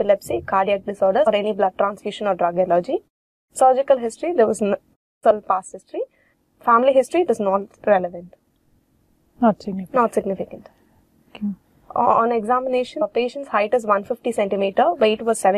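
At 1.26, 5.30 and 13.01 s, compressed frames are skipped. The audio leaps ahead roughly 0.1, 0.3 and 0.2 s.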